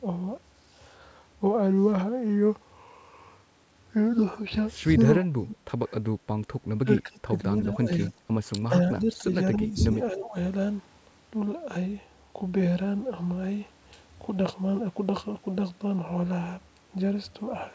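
Speech, with speech suppressed in double talk across roughly 5 to 10 seconds: the voice sinks or breaks up at 5.30–5.58, 6.83–7.35, 7.54–8.13, 8.59–8.75, 8.95–9.31, 9.55–9.94 and 10.11–10.36 s. The dips range from a slight sag of about 5 dB to near-dropouts of about 25–30 dB. The likely cause is an echo canceller misreading simultaneous far-end talk as echo and attenuating the near talker with it. The band edge at 8 kHz fits a wideband G.722 call path.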